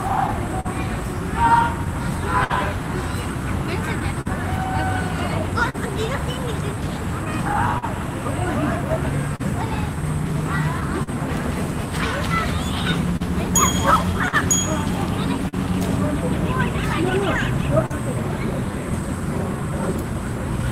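A recording of everyday sounds, about 21 seconds long, with a steady undercurrent of timing trouble. The root is clock drift between sender and receiver: the sending clock runs roughly 3 percent slow relative to the receiving end, so the jitter buffer keeps draining faster than it's refilled. You don't hear that as a single event. It shows up as small timing stumbles that come and go at uneven spacing across the whole clip.

The first symptom is a run of scattered short gaps from 0.27 s to 17.92 s. There are about twenty of them, each briefly patched over by stretching out whatever sound came just before. None runs longer than around 50 ms, and together they add up to about half a second, roughly 3 percent of that stretch. Nothing actually drops to silence, but you get little smears and ticks here and there.

On top of that there are repeated timing corrections from 4.15 s to 20.14 s. The receiver keeps repeating tiny slices to stay in step with the slow sender, which plays that section at about 99 percent speed and pads it out by around 100 ms overall. 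Every edit pushes the same way but lands at irregular points.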